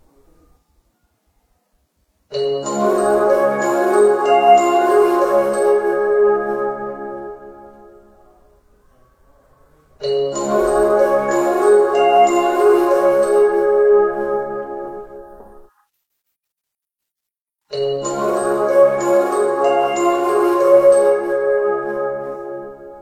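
There are no technical faults to describe in time order anywhere in this recording of everyday sounds.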